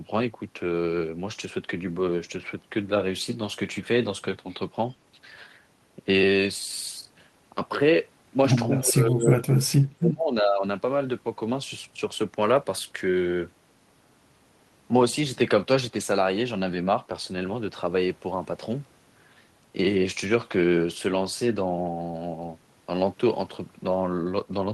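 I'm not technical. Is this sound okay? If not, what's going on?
No. From 8.82 to 10.64 seconds the speech sinks sharply. This is speech suppressed in double talk: both sides likely spoke at once, and the echo canceller, unable to separate them, turned the talker down too.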